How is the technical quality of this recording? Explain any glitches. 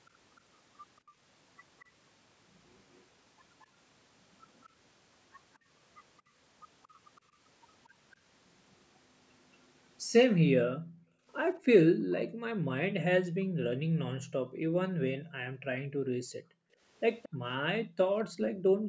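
The recording has two kinds of call-processing fault: a delayed echo of the speech and dips in the background sound. The call's microphone path carries nothing above 8 kHz.

Echo leak, 0.06 to 6.86 s and 17.22 to 18.48 s: a copy of the speech trails it by 227 ms. In the first stretch it is very faint, roughly 30 dB down. Near the end it is far stronger, around 15 dB below the speech. This is likely a loudspeaker's sound getting past the far end's echo canceller.

Background gated by the echo canceller, 1.01 to 1.17 s, 6.21 to 6.34 s and 10.28 s to the end: the canceller pulled the microphone down while the loudspeaker played. The room sound drops briefly, by about 16 dB and about 15 dB. From 10.28 s it is suppressed almost continuously, by up to about 40 dB.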